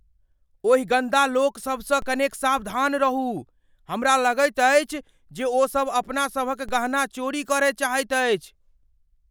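It's a speech clip with two DC steps, at 2.02 s and 6.69 s, each a sudden jump of about -27 dBFS in the waveform's zero line. You hear a low thump, then the offset drains away through what behaves like a 2 Hz high-pass, while the speech carries on untouched.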